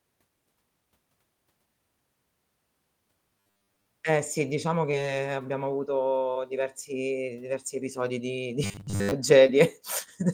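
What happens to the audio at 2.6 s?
Nothing goes wrong at 2.6 s; the speech carries on intact through that moment, with no dropout, click, glitch or other fault to be heard.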